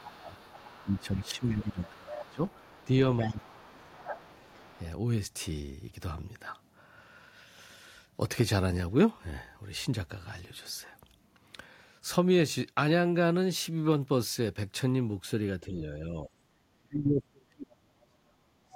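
From 0.00 to 0.38 s the speech is pulled down by about 20 dB. This is speech suppressed in double talk: with both ends talking at once, the echo canceller likely mistook the talker for loudspeaker echo and attenuated everything. From 0.34 to 2.85 s a faint second voice, about 25 dB under the speech, runs beneath it. That is the other side's voice leaking through, likely residual loudspeaker echo the canceller failed to subtract. Leakage adds a separate, quieter voice, while suppression removes level from the main one.

Inside that stretch, 0.83 to 2.39 s, the main speech again sinks by about 20 dB. The same happens from 3.23 to 4.18 s, overlapping a weaker leak, about 30 dB down, from 3.44 to 4.80 s. At 15.61 to 16.32 s the dip is shallow, about 5 dB. From 16.74 s to the end it is deep, about 35 dB. A brief, relatively strong leak, about 20 dB down, appears at 18.72 s.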